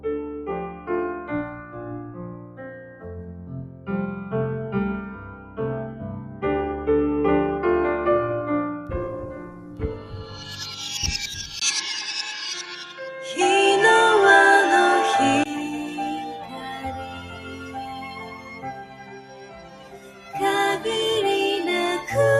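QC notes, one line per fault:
throughout: noise suppressor applied to music or sounds. A speech-tuned suppressor treats steady tones and tails as noise, so the level pumps by roughly 10 dB.
0.73–0.89 s, 1.52–3.88 s, 5.14–5.58 s, 5.92–6.43 s, 9.32–10.53 s, 17.05–20.34 s: sound cut by the noise suppressor. Held and decaying sound sinks by about 7 to 8 dB while onsets survive.
11.60–15.46 s: input switched to a poorer device, likely. A 20 ms gap opens, the band narrows, and the level shifts by around 5 dB. New hiss sits roughly 40 dB down.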